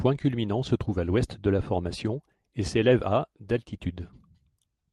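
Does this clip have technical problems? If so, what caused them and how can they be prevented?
No, this clip does not have technical problems, so there is nothing that needs preventing.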